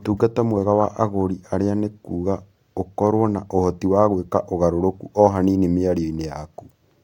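No technical faults can be heard anywhere in this recording of speech.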